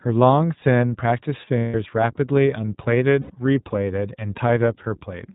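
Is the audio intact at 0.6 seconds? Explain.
No. At 0.6 seconds, as across the whole clip, the speech carries plainly audible iLBC codec damage. Each 20 ms frame's excitation is coded on its own, with nothing above 4 kHz kept, so the speech sounds band-limited, slightly rough and synthetic, at a rate that fits about 15 kbps. Simple telephone-band filtering would muffle the speech but leave it smooth. Here the grainy, buzzy texture shows the speech was rebuilt from a coded model.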